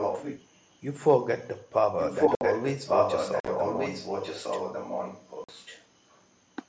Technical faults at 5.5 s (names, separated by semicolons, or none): echo leak; unconcealed Bluetooth headset packet loss